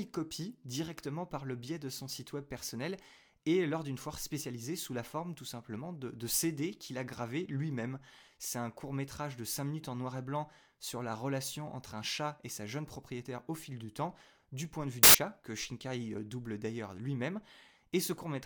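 Samples built from the wrong bytes, 15.03 to 15.15 s: byte order slips, so low bits dominate each value, giving a brief burst of loud, harsh broadband noise over the speech.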